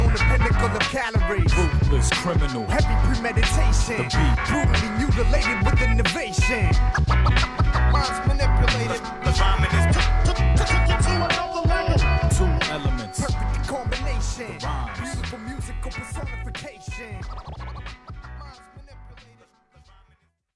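Nothing stood out as a technical problem on listening to this audio.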